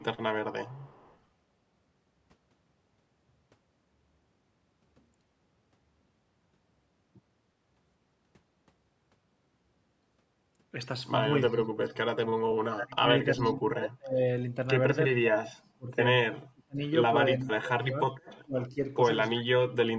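From 0.0 to 1.18 s, a faint echo leak sits under the speech: a delayed copy trailing by 346 ms at about 35 dB below the talker. This is likely a loudspeaker-side echo canceller letting residue through. It returns briefly and louder, at about 25 dB down, from 13.38 to 13.53 s.

Speech suppressed in double talk occurs at 11.5–11.91, 12.67–14.56, 15.14–15.95, 16.52–16.82, 17.36–18.79 and 19.35–19.98 s. The canceller likely mistook overlapping talk for echo. The voice drops by roughly 30 to 40 dB.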